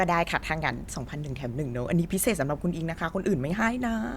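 There are no technical faults to describe here, so there is nothing to place in time order.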